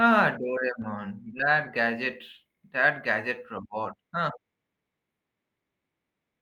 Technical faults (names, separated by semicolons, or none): lost packet rebuilt from error correction